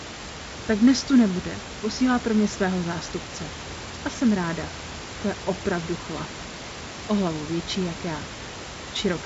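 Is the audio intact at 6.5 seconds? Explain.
Yes, the audio is intact at 6.5 seconds, with nothing beyond the room noise and the band-limited sound of wideband telephone coding.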